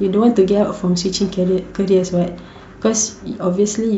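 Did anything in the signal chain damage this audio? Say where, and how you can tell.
No, nothing in the signal chain audibly damaged this speech recording. No stage from the wiring through to playback left a mark that can be heard.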